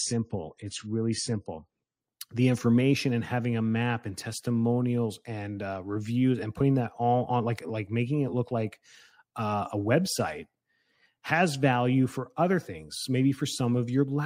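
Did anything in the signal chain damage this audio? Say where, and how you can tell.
Yes. Network and codec stage: adaptive stream starting at a low bitrate. Until 2.0 s nothing sits above 10 kHz, then quality jumps with no gap, fitting a step up to a higher-bitrate stream.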